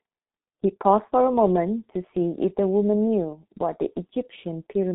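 G.723.1 codec damage runs through the whole speech clip: nothing passes above 3.8 kHz, and the heavy, hoarse, muffled quality with smeared consonants points to a very low bitrate around 6 kbit/s, where slowly updated 30 ms frames blur rapid changes in the sound.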